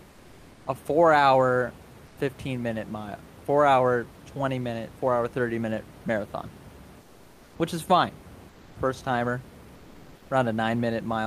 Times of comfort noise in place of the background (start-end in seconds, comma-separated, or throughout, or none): 0.00-0.65, 2.07-2.17, 7.01-7.55, 8.49-8.75, 9.75-10.29